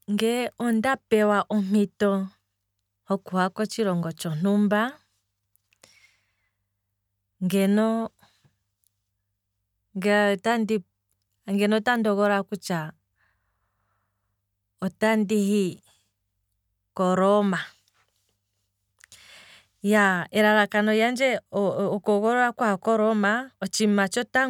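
No technical faults can be heard anywhere in this recording.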